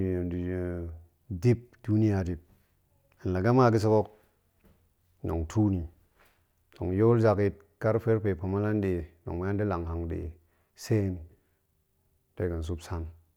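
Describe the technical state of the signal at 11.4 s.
At 11.4 s the speech signal is intact, with no technical fault present at that moment.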